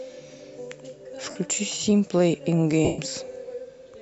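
At 1.30 s there are lost LE Audio frames, about 52 ms gone. The LC3 decoder covers the gap by reusing the last spectrum with scrambled signs, so the speech smears into noise. It happens again at 2.85 to 2.99 s, about 135 ms, where the concealment fades noticeably as it drags on. The light codec softening is just normal compression.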